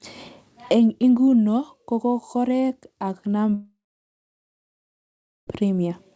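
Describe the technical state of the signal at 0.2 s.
At 0.2 s the speech is intact, with no dropout, glitch or distortion, and only the expected call-codec band limit: no energy above 8 kHz, consistent with a G.722 link.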